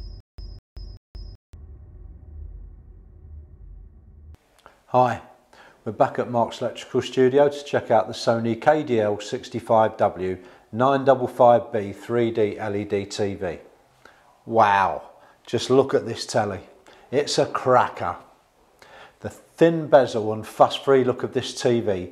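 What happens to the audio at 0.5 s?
The audio is caught in a stutter with silent gaps, already under way when the clip begins and lasting until about 1.53 s. The same 0.2 s burst plays three times, each followed by about 180 ms of dead digital silence, repeating every 0.38 s. This is likely a playback stall that replays the last fragment on each retry, and the material that belonged in those gaps is missing. A spectrogram shows identical blocks separated by empty columns, and the waveform shows near-flat lines between the bursts.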